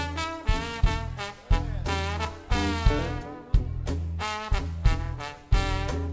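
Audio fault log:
The signal has passed through a WebRTC call path whose wideband coding leaves no content above 8 kHz, consistent with G.722 at 64 kbps, and nothing in it departs from what that path normally delivers.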